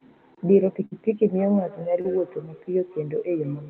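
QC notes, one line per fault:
0.85–0.93 s, burst of packet loss: about 60 ms of audio never arrived; the receiver stretched the last sound for about 57 ms, then the audio jumps ahead.
1.36 s to end, feedback echo between two devices: another device's speaker loops back into the microphone, returning the sound roughly every 150 ms, at most about 19 dB below the speech.
2.01–2.06 s, short concealed packet loss: about 40 ms went missing; the decoder extrapolated the preceding sound for about 31 ms, giving a brief smear before blending back.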